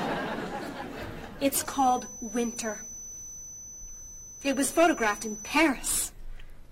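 From 1.57 s to 5.63 s a feedback whistle sits behind the sound: a thin, steady tone at 6 kHz, roughly 15 dB below the signal and swelling and fading slowly in level. The likely cause is a loudspeaker-to-microphone loop held just at the edge of instability.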